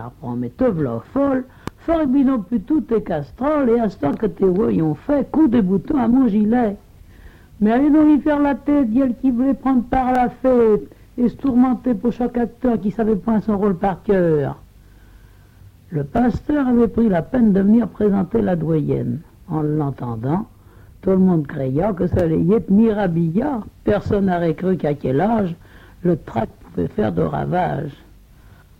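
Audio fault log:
1.68–1.70 s, loud pop: a single sharp pop about 10 dB above the signal, which continues underneath; likely a voltage pulse from a switch, plug or static.
4.13, 10.15, 16.17 and 22.19 s, overlapping chunks: each 6 s chunk begins 20 ms before the previous ends, so that slice replays, giving a regular click-like stutter.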